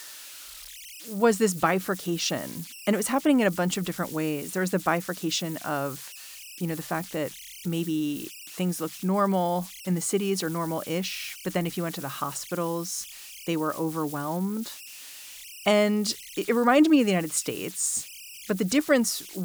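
A delta-sigma converter running without dither has settled into repeating bit patterns whenever its input gets small, and across this whole speech clip those converter idle tones come through as a whistle pitched around 3 kHz, sitting about 18 dB below the signal. The tone comes through in the pauses between phrases, and under the speech it turns into a grainy, buzzy texture rather than a clean tone.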